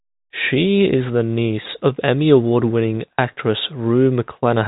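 Nothing goes wrong anywhere in this speech, which simply carries the narrow band of an ordinary telephone line, topping out around 3.8 kHz, just as a G.711 call would.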